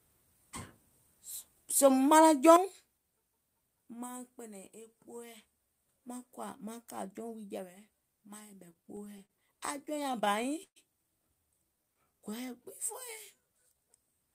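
From 8.73 to 10.78 s the speech suffers repeated stalls (stutter): packets arrived late, the jitter buffer kept emptying, and the receiver stretched the last sound across 18 gaps, the longest 129 ms. Nothing is lost, but the flow drags. On a spectrogram, frozen harmonic bands repeat, with fades in the longest holds.

A jitter buffer slow-down follows at 11.77 to 12.62 s, adding 81 ms (92% speed), and again at 13.36 to 13.86 s, adding 78 ms (86% speed). Repeated pitch periods pad the buffer, so the sound runs slower at unchanged pitch. The waveform shows duplicated cycles, and spectrogram features look horizontally stretched.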